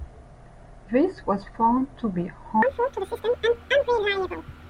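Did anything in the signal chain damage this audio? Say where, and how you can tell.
Yes. The fault is a wrong sample rate at the playback stage. From 2.62 s to the end at about 4.69 s, the speech suddenly runs twice as fast and sits a full octave higher, 12 semitones up. Speed and pitch jump together by the same ratio, and there is no other change in tone. That points to samples clocked out at double their intended rate with no conversion, which fits audio recorded near 22 kHz being played at 44.1 kHz.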